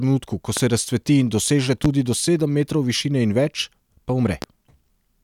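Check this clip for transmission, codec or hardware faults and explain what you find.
Three loud pops sit on top of the speech, at 0.57–0.60 s just before "se razcveti in doseže", at 1.85–1.88 s just after it, and at 4.42–4.46 s after "višine in več pa". Each is a single sharp pop, roughly 15, 15 and 10 dB above the speech, which continues underneath. A brief voltage pulse, likely from a plug, switch or static discharge, is summed into the signal.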